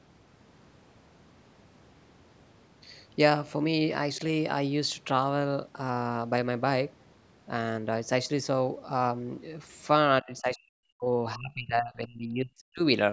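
Speech suppressed in double talk, likely from an echo canceller treating the talker as loudspeaker echo, hits twice: from 10.21 to 11.07 s the speech falls away almost completely, then from 11.35 to 12.82 s it sinks deeply again, thinning and breaking into fragments.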